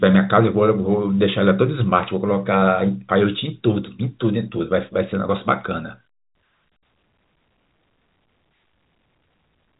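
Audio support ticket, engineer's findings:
No fault found in the speech; the G.711 A-law telephone band, with nothing above about 3.8 kHz, is working as expected.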